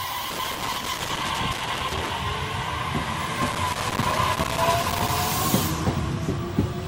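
A worn or dirty contact in a cable or jack is making and breaking as it shifts, which produces loose connector crackle twice: from 0.30 to 2.10 s, and again from 3.42 to 5.18 s. Each time the contact opens, the signal is chopped off and then snaps back, so the sound breaks up under an irregular, scratchy burst of crackling that stops as soon as the connection settles.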